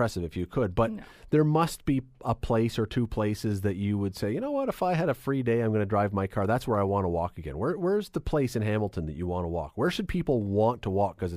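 No faults can be heard anywhere in this speech recording.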